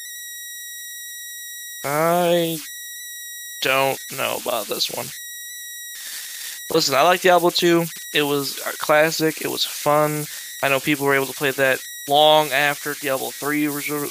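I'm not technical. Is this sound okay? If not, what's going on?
No. The recording's converter, lacking a little added noise, falls into repeating patterns on quiet parts, causing converter idle tones: a high whistle near 2 kHz throughout the speech.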